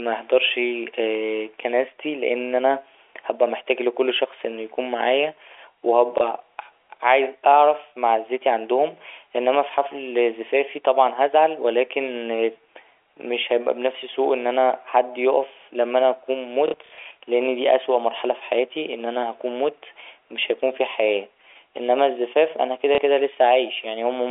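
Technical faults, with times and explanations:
6.18 s, packet loss with last packet repeated: a single gap of about 30 ms, which fits a 30 ms packet, is filled by replaying the previous packet, and it sounds like a small blip.
16.68–16.98 s, packet loss with last packet repeated: after "يقف لما أنا أكون", about 180 ms of audio is lost in several gaps across 300 ms, the longest run 60 ms. The repeated packets produce a robotic buzz near 33 Hz, until "لأن دي أسوأ مرحلة".
22.95 s, packet loss with last packet repeated: right after "إنما الزفاف أنا كده", one packet of about 30 ms is lost and the last one is played again, giving a small blip over the telephone-band audio.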